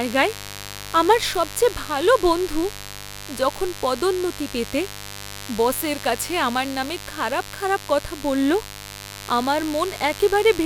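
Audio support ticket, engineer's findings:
Steady raspy buzz under the speech for the full clip, roughly 15 dB below it. Mains buzz at 50 Hz: probable dimmer, rectifier or unshielded cable injecting switching spikes twice per cycle, harmonics into several kHz. Check grounding, shielding.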